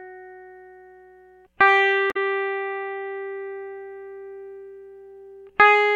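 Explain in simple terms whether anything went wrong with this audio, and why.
Something did go wrong in this music. At about 2.10 to 2.17 seconds there is damaged data in a compressed stream. A short run of the stored file is corrupted. The player cannot read it properly, loses its place, and briefly lets out a chirp, click or short gap.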